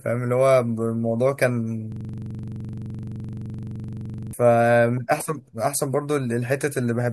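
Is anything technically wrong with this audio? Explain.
Yes. From 1.92 to 4.33 s the speech locks into a rapid, rattling stutter repeating at 23.4 Hz. This is a system hang loop. The system stalled while the audio hardware kept replaying one 42.67 ms block, which fits a 2048-sample buffer, 56 times in a row.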